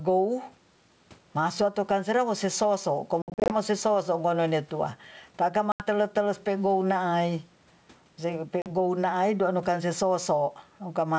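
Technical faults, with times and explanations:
throughout: gain pumping. The background swells between loud sounds and ducks by around 10 dB under each, likely from excessive mic gain driving a fast limiter, leaving speech squashed.
3.22–3.56 s (180 ms lost across 280 ms, longest gap 60 ms), 5.72–5.84 s (80 ms), 8.62–8.68 s (40 ms): packet loss on an ADPCM call. Missing packets leave hard-edged silences, and the decoder's predictor loses sync, so speech returns slightly distorted.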